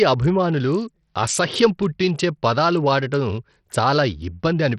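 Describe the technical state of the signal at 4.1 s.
At 4.1 s the speech sounds gritty and grainy, with treble that thins and flickers and nothing above about 14.1 kHz, as it does across the whole clip. The likely cause is heavy Bluetooth SBC compression at a starved bit budget, consistent with roughly 64 kbps, which leaves the upper sub-bands short of bits and coarsely quantises the rest.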